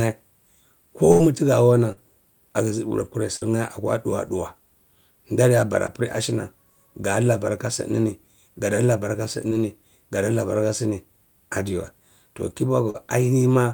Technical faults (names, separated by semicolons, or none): burst of packet loss; short concealed packet loss